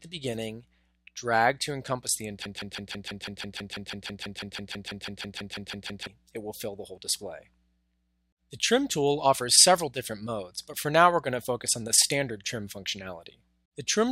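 At about 2.45 s the audio catches into a broken-record loop: a fragment roughly 0.16 s long repeats exactly, back to back, about 22 times, stuttering on until around 6.07 s, when normal playback picks up again. That sounds like the player, encoder or stream likely stalled and kept pushing out the last chunk it was holding, so whatever should have played during those roughly 3.6 seconds is simply gone.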